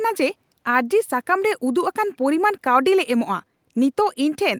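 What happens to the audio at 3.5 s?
At 3.5 s the speech carries on intact, with no dropout, click, distortion or other fault at that point.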